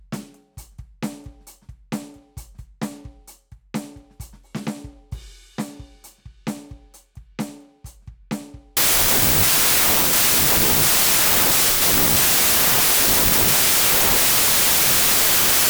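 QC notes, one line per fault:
8.77–15.69 s: wrong sample width. The music was stored as packed 24-bit samples but from here is read as 16-bit ones, so many values are built from mismatched bytes and only some keep the real top bits. Loud broadband noise results, with the music faintly underneath at 0.667 times speed and pitched down by that ratio. The waveform becomes a dense block, and the spectrogram fills with wideband noise over faint, lowered harmonic lines.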